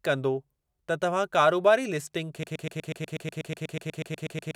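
Speech plays cleanly until 2.43 s, then a broken-record loop takes over. A fragment of about 122 ms repeats exactly, back to back, to the end of the clip. The player or stream likely stalled on its last fragment. The speech from that point is lost.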